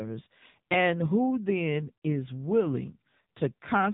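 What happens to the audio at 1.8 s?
At 1.8 s you're hearing the AMR narrowband mobile codec, which runs through the whole clip. The speech is squeezed into a crude vocal-tract model at a low rate, likely around 6.7 kbps, so it's buzzy and synthetic, with nothing above about 3.8 kHz.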